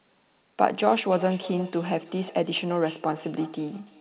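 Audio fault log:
1.1–4.0 s, feedback echo between two devices: from 1.1 s to the end, the speech comes back at an interval of roughly a third of a second, each repeat thinner and more ringing than the last, peaking at about 17 dB below the speech. A second device in the room is replaying this call, and the microphone picks that playback up again; the echo canceller only removes its own device's output, so the loop keeps circulating. Through the call path, audio stops at 4 kHz, which fits a G.711 narrowband codec.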